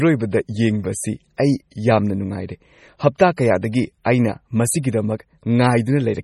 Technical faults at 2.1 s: MP3 compression

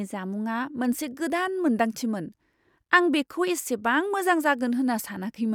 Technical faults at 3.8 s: none

